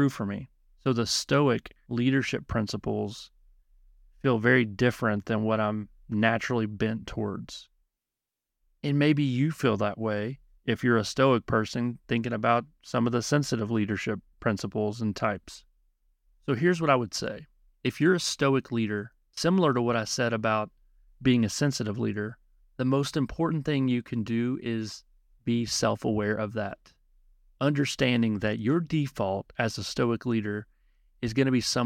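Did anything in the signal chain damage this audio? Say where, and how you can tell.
No, no signal-chain damage heard.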